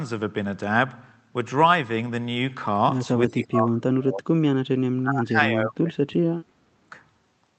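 Speech passed through an Opus call path, with sound content reaching up to about 8 kHz. It is pulled down twice, from 3.28 to 4.36 s and from 5.02 to 6.91 s, by about 30 dB and about 35 dB at the deepest. Within those spans, roughly one and one and a half seconds respectively are affected. The likely cause is speech suppressed in double talk: the echo canceller treated this talker as loudspeaker echo and turned it down. Packet loss would instead leave abrupt gaps or garbled concealment at the codec's frame rate, not these level dips.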